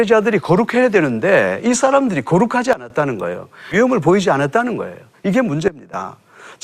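Speech, with two sudden gain jumps: from 2.73 to 2.90 s and again from 5.68 to 5.94 s, the level drops by about 15 dB in a single step, background and all, then steps back up. That's likely a digital gain setting applied with no ramp. Between them, at 3.71 to 3.77 s, the sound jumps ahead abruptly, as if a piece of the programme is gone, which points to a stream segment skipped, likely one that failed to load before the player moved on.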